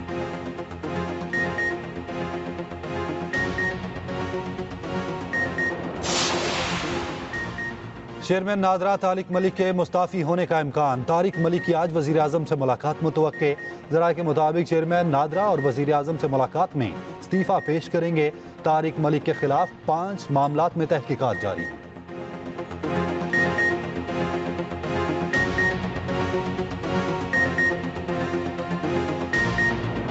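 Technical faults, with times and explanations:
No technical faults can be heard in the audio. It has been through a call's microphone processing, which leaves nothing above 8 kHz and thins out the lowest bass as it normally would.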